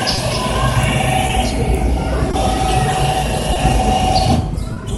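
Clock drift between sender and receiver runs through the whole clip: the sending clock is roughly 2 percent slow, so the receiver's jitter buffer keeps draining, and the audio develops small, irregular timing hiccups where playback briefly runs ahead of the incoming stream.

Short stalls from a late packet occur at 0.15, 1.27, 2.31, 3.53 and 4.73 s. Each time the buffer runs dry, the receiver holds the last sound for about 20 ms, or 30 ms at the final one, then resumes without losing anything, leaving a brief hold with a slight buzz or dip.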